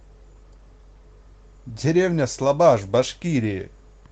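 Nothing in this speech needs flagging, as no technical faults turn up anywhere.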